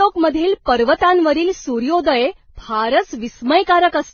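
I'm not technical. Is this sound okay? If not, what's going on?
No. Throughout, the speech sounds dull above 6.6 kHz, with smeared, watery and gritty textures mixed together, most likely transcoding between lossy codecs, not one heavily compressed pass.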